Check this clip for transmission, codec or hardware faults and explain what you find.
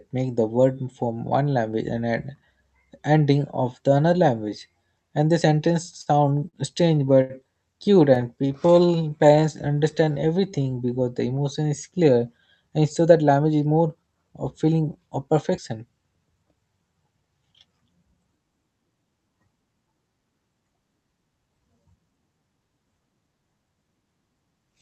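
Three kinds of jitter-buffer fault appear in the speech, carried over a call path whose Opus coding cuts the audio off at 8 kHz.

Repeated stalls (stutter) occur at 6.01–7.33 s and 8.15–8.91 s. Packets arrived late, the buffer ran dry, and the receiver extended the last sound to bridge each wait. The first run has five gaps, the longest 84 ms. The second has six gaps, none over 17 ms. Nothing is lost, but the flow stumbles.

A jitter buffer slow-down runs from 7.94 to 10.94 s, ending just before "the emotion is clear". The receiver repeated pitch periods to rebuild its reserve, adding 232 ms. Speech plays at 93% speed at unchanged pitch, sounding drawn out.

A jitter buffer speed-up follows "the emotion is clear", from 12.70 to 15.34 s. With excess audio buffered, the receiver repeatedly cut short pitch-period pieces, roughly 0.3 s in total. Speech runs at 111% speed at the same pitch and sounds hurried.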